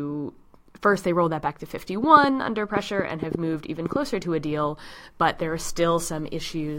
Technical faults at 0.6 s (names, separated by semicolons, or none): none